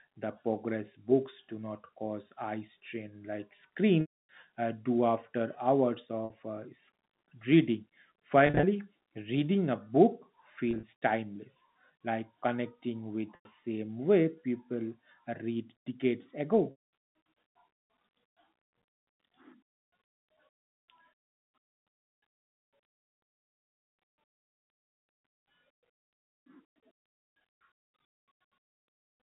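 Packet loss with pitch repetition hits the speech at 4.01, 6.25, 8.47, 10.71, 13.35 and 16.71 s, first after "cause eye strain like". Missing audio is bridged by repeating the last pitch period. The shorter gaps sound like a brief held buzz through the telephone-band line, while the longer ones fade into silence before the speech returns with a short cross-fade.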